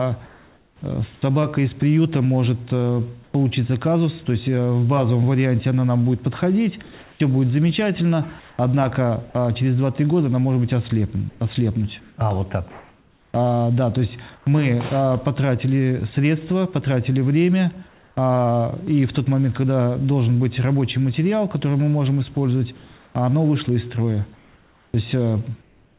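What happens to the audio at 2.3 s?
Nothing goes wrong at 2.3 s: the sound carries on intact through that moment, with only the narrow telephone-style band of the call path, which leaves nothing above 4 kHz.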